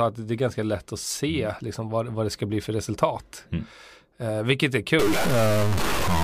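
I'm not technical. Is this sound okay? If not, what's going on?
No. Stuck bit from 4.99 s, just after "vilket är", to the end: harsh buzzing, likely from one digital bit frozen, pushing about half the samples noticeably off.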